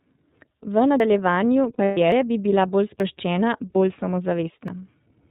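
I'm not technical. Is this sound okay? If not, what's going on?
No. iLBC codec, throughout the whole clip: the speech was squeezed by a phone-style voice codec that works in 30 ms chunks and cuts everything above 4 kHz. That's why the voice sounds muffled, slightly rough and a bit synthetic all the way through.

Dropped buffer (overrun), at 1.0, 2.12, 3.0 and 4.68 s: each time you hear a jump in the speech, usually with a click. A slice of roughly 40 ms was simply thrown away and the two ends were stitched together, likely because the recording program fell behind and its audio was overwritten before it was saved. The 2.12 s jump comes just before "bi bila bolj", and the 3.0 s one just after those words.

Lost iLBC frames, from 1.73 to 1.98 s, right before "bi bila bolj", and again at 3.72 s: pieces of the transmission went missing, 180 ms scattered across that first stretch and a single 30 ms chunk later. 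The decoder filled each gap by repeating the last bit of voice with some noise, so you hear a brief held, buzzy vowel before the speech snaps back.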